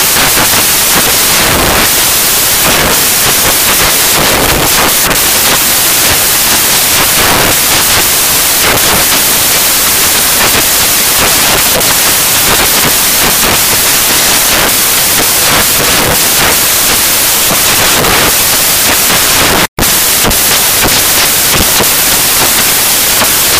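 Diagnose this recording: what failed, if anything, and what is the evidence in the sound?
The failure is in sample-format conversion: samples built from the wrong bytes, across the whole recording. The audio arrives as loud, dense white noise. Misassembled bytes push the rapidly changing low-order bits into the high-order positions.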